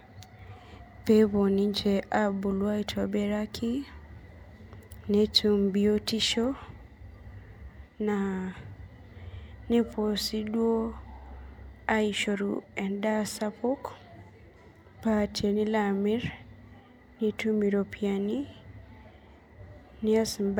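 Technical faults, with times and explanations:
No technical faults are present in this speech recording.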